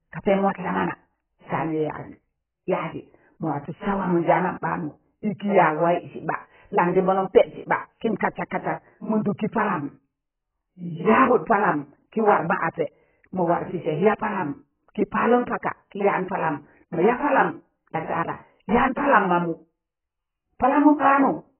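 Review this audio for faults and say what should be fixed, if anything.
Throughout the speech, nothing reaches above about 3.1 kHz, and sibilants and sustained vowels carry a warbling, fizzy smear. This is likely heavy AAC compression: at a rate that fits roughly 8 kbps, the encoder drops the upper band and starves the rest of bits, so coarse quantisation leaves holes and noisy fills. A plain low-pass filter or telephone channel would cut the top cleanly without this swirling texture in the remaining band. To prevent it, encode from the original source at a far higher bitrate or in a lossless format.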